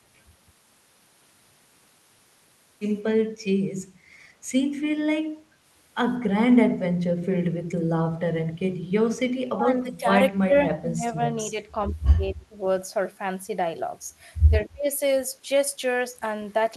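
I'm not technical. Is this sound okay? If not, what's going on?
No. Speech suppressed in double talk happens at 9.64 to 10.05 s, 10.31 to 11.21 s, 11.51 to 11.77 s, 12.16 to 12.61 s and 14.64 to 14.88 s. In each stretch the speech suddenly drops in loudness, sometimes almost vanishing. This is likely the call's echo cancelling at work: when both people talked at once, it couldn't tell this speaker from the echo of the other side, so it turned both down.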